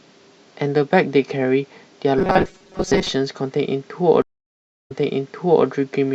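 From 2.18 to 3.09 s the speech turns into a rigid, metallic buzz that still loosely tracks the syllables. This is robotic sound from repeated short buffers, likely caused by audio arriving too seldom, so a slice of roughly 5.3 ms is replayed over and over while about half of the real signal is skipped. That repetition imposes a fixed 188 Hz pitch. On a spectrogram it shows as evenly spaced horizontal harmonics at multiples of 188 Hz, and the waveform shows the same short cycle repeated.

A stream reconnect follows between 4.22 and 5.66 s. The connection drops, leaving about 0.65 s of silence, and a new decoder then picks up mid-stream. Playback resumes about 0.78 s earlier than where it cut off, so a stretch of speech is heard twice. A waveform shows a flat gap followed by a repeat of material already played, and on a spectrogram that blank column sits next to a pattern that matches the section just before the break.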